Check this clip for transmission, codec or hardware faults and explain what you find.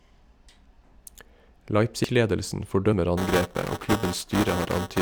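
Two kinds of fault show up in the speech: three skips where audio is lost, and a buffer tearing buzz over the last part of the clip.

At 0.84 s, 2.04 s and 3.72 s the sound jumps ahead with no gap, losing roughly 50 ms, then about 100 ms, then about 50 ms again. The likely cause is a dropped buffer (overrun), where the hardware overwrote samples before the program read them.

From 3.17 s to the end, buffer tearing sets in: the writer and reader of the ring buffer have drifted so they cross inside each period. A small slice of every buffer replays audio a few milliseconds old, producing a rattling 345 Hz buzz over the speech, which fits a 128-sample buffer.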